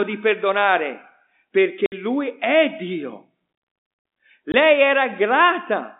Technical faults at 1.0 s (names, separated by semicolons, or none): none